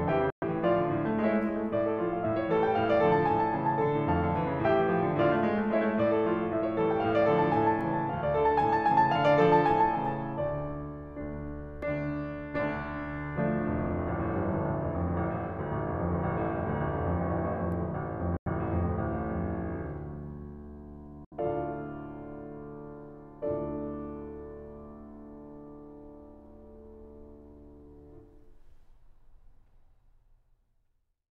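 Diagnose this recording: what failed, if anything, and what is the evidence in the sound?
Bluetooth dropout, likely, at 0.30 to 0.44 s, 18.37 to 18.48 s and 21.25 to 21.33 s: the music cuts to silence for about 116 ms, 93 ms and 70 ms. The fault is in the wireless playback link. Packets arrived too late to use and were discarded, so the output went silent. Each gap fits three to five lost frames, and the music resumes further along, as though it had kept playing.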